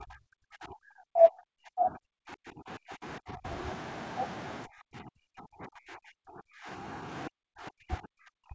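From 0.0 to 3.45 s, 4.64 to 7.05 s and 7.28 s to the end, the speech dips by as much as about 40 dB, thinning and breaking into pieces. This is speech suppressed in double talk, likely an echo canceller muting the talker while the far side spoke. Unlike packet-loss gaps, the cuts are long.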